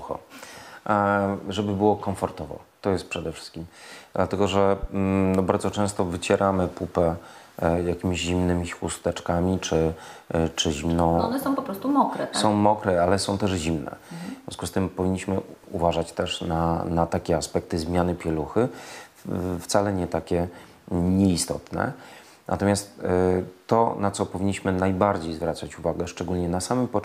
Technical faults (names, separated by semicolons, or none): loud pop